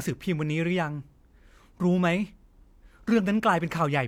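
No technical faults can be heard anywhere in the speech recording.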